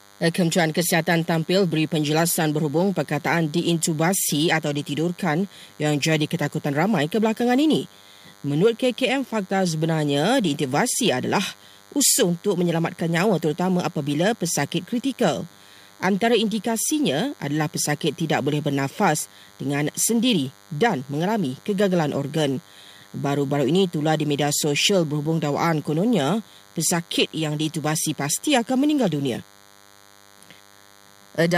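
A thin, steady buzz sits under this speech recording from start to finish: DECT cordless phone buzz, roughly 30 dB below the voice. A nearby DECT handset or base station transmits a radio burst every 10 ms, and the audio circuitry rectifies those bursts into a 100 Hz pulse train. Mains hum is a smooth, rounded drone. This buzz is edgy and rasping, because the sharp pulses spread energy across many harmonics well above the fundamental.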